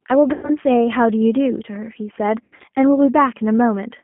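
From start to end the speech carries the G.729 codec's signature, plainly audible: a narrow line band of roughly 200 Hz to 3.4 kHz and a slightly rough, synthetic grain. Each 10 ms frame is rebuilt from a vocal tract filter, a pitch predictor and a few pulses at 8 kbit/s. That grain is what sets it apart from a simple telephone band-limit, which would sound muffled but still smooth.

At 0.33 to 0.51 s, VoIP packet loss concealed by the speech codec stretches the sound into a buzzy tone or coloured noise that fades, over about 100 ms of missing audio, which fits five 20 ms packets. At 2.44 to 2.69 s a second loss is scattered over about 240 ms, with the longest gap 80 ms, so the voice is weak or distorted through that stretch. Because the decoder keeps extrapolating the last pitch and filter rather than leaving silence, these gaps are stretched out and decay instead of cutting out cleanly the way a plain dropout would.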